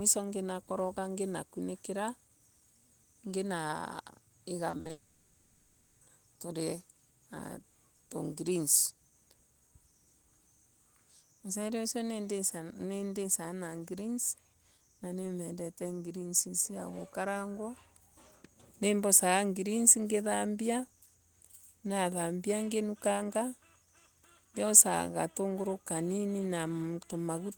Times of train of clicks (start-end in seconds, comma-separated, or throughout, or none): none